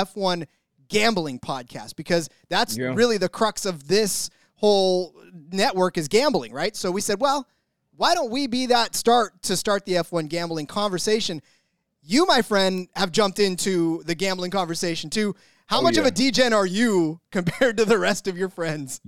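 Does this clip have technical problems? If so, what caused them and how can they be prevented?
Yes. A bit error spike occurs at 12.78 s, just before "have jumped into the". It is a single sharp tick, broadband and unrelated to the speech. It is so brief that it fits two or three consecutive samples corrupted by one flipped bit, which throws their values off by a power of two before they snap back. Error-checked memory and error-detected digital links, with checksums or CRC along the signal path, prevent such flips from reaching the audio.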